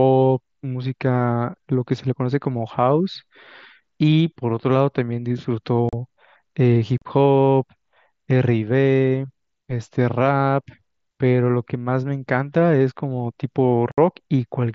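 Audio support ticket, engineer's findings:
Short silent holes in the speech with abrupt edges at 5.89 s and 6.98 s (about 40 ms each) and 13.92 s (about 60 ms). Probable component: headset-to-phone radio link. Fault: unconcealed Bluetooth headset packet loss. Voice packets were dropped and replaced by silence with no concealment. The gap lengths fit runs of five and eight lost mSBC frames. The mSBC link carries wideband speech up to 8 kHz, with light grain on loud syllables.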